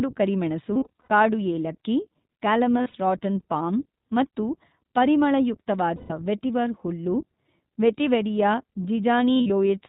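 The whole clip passes through the iLBC codec. Everything above 4 kHz is missing, and the speech has a plainly audible rough, synthetic edge, consistent with the 15.2 kbps, 20 ms frame mode. Unlike a muffled low-pass recording, the coarseness is in the excitation itself.

Lost iLBC frames occur at 0.75–1.10 s (about 240 ms missing across 360 ms, longest run around 100 ms), 2.78–2.96 s (120 ms across 160 ms), 5.96–6.12 s (140 ms) and 9.34–9.51 s (100 ms across 160 ms). The decoder fills each gap by repeating the last pitch cycle with added noise, so the gaps sound like a held, buzzy vowel rather than silence, and the speech snaps back clean immediately after.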